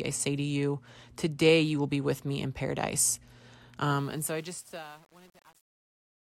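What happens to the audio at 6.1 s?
At 6.1 s the speech is deep in the tail of a fade-out and shows truncation distortion on the fade, audible from 3.90 s to the end at 6.31 s and worst after 4.08 s. The gain stage drops low bits without dither, which fits 8-bit resolution, so the waveform collapses into coarse steps and the quiet tail turns gritty.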